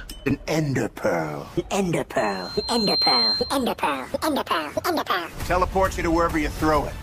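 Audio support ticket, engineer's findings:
Loudspeaker feedback squeal, 2.17–3.76 s. Mic picking up its own monitor/PA output; loop gain above unity at 4.2 kHz. Single tone swells over roughly a second, ending a few dB above the programme, then cuts off at 3.76 s. Probable component: mic-to-speaker placement or monitor gain.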